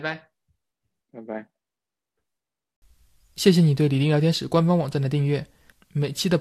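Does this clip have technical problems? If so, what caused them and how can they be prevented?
No, nothing in this speech recording points to a technical fault, so there is no cause to trace and nothing to prevent.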